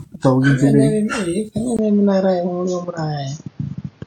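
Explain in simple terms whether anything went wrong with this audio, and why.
A couple of things are going on here. The whole recording has that swirly, hollow, smeared quality, and the starts of sounds feel soft and blurred. That's generation loss, likely from the speech being squeezed through the same lossy AAC codec around seven times in a row. Each round throws away a bit more detail in slightly different places, so the damage piles up into something worse than one pass would cause.

Then at about 1.77 s there's a tiny gap of about 20 ms, and from there to the end the speech suddenly sounds duller and boxier, with a faint new hiss underneath, though it isn't any louder or quieter. That's an input switched to a poorer device, likely a jump to a different microphone or a headset's call mode. The new input cuts off everything above roughly 6.8 kHz, which is why the crispness disappears.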